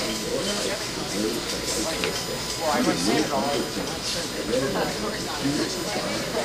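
A thin, steady whine of fixed pitch runs under the sound from start to finish, built on a 1 kHz tone with its strongest component at 5 kHz, the fifth multiple, sitting roughly 15 dB below the sound itself. This is USB whine. The USB bus draws current in bursts every millisecond, and that rhythmic draw leaks through the power or ground wiring into the audio path, producing a tone locked to 1 kHz and its harmonics.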